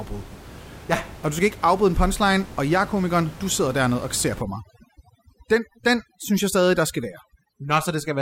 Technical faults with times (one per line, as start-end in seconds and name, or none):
4.42-8.22 overdone noise removal